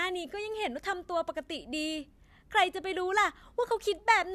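Nothing in this recording of speech stands out as a technical fault; it simply runs its course with no dropouts, glitches or other problems to point to.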